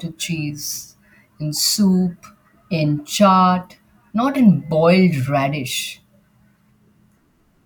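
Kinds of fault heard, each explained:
No faults can be heard.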